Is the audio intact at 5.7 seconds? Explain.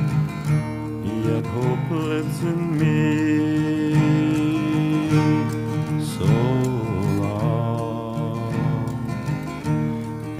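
Yes, the audio is intact at 5.7 seconds, with no dropout, click or other fault at that point.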